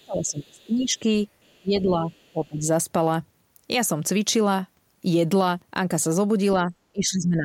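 Faint leakage of the other side's voice, roughly 40 dB below the speech, sits at 0.0, 1.43 to 1.61 and 2.11 to 2.47 s. It is likely residual loudspeaker echo. Speech suppressed in double talk dips the voice, by up to about 25 dB, at 0.04 to 1.06, 1.62 to 2.09, 2.33 to 2.66, 6.58 to 6.74 and 6.92 to 7.44 s. The echo canceller likely ducked both sides at once.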